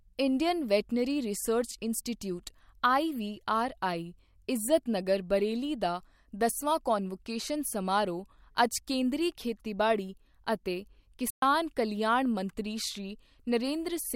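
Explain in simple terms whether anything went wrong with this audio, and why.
Around 11.3 seconds, the speech cuts out dead for a brief moment, about 120 milliseconds, then carries on at 11.42 s. That's a playback stall: the sound simply stops mid-flow and goes quiet instead of crackling or warping. The likely cause is the player running short of audio data, or briefly getting held up, so it had nothing to send out until it caught up again.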